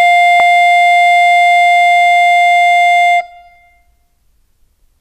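At 0.39 s the music jumps forward, a case of compressed frames skipped. Several whole frames of the encoded stream never reach the output. They were either missing or rejected by the decoder as damaged. The frames here are 26.1 ms long, and about 150 ms of music is lost. That fits roughly five frames. The passage lurches ahead at the join.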